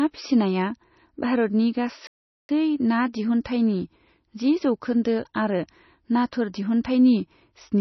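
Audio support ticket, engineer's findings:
MP3 compression, throughout: watery, swirly speech, s sounds chirpy and metallic. Spectrogram shows a hard treble ceiling and flickering holes; heavy damage, likely a low-bitrate encode around 24 kbps.

Playback stall, 2.07 to 2.49 s: speech cuts out mid-flow for about 0.42 s, then resumes. Waveform shows a flat silent gap. Likely a buffer underrun or blocked player thread.

Pre-echo at 3.44, 6.31 and 6.84 s: short hiss smeared ahead of sharp attacks, 11 to 13 ms each. Spectrogram shows a thin broadband haze just before each onset, where codec quantisation noise has spread across the block.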